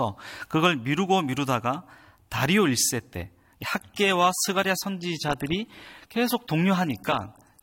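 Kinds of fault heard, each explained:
Adaptive stream at a lower bitrate: from about 3.6 s to the end, the quality suddenly drops, with more smeared, warbly codec artefacts and no gap at the switch. The stream dropped to a cheaper version, consistent with AAC falling from roughly 96 to 24 kbit/s.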